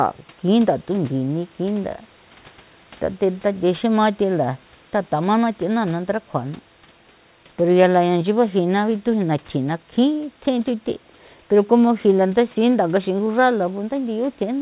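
No technical faults can be heard in this recording.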